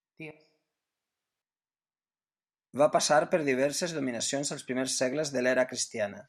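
Speech, with a switch to a distant microphone from 0.31 to 1.42 s. The sound abruptly turns roomy and hollow, loses bass, drops roughly 10 dB and carries background noise about 25 dB below the speech, then snaps back, likely because the close microphone's signal dropped out.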